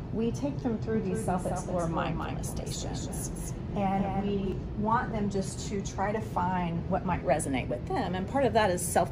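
A doubled audio track runs from 0.94 s to 4.52 s: a second, full-band copy of the sound trails the original by roughly a fifth of a second, a few decibels quieter, with no decay or room colour, and it cuts in and out abruptly. The likely cause is a slower second capture path or an edit holding two offset copies.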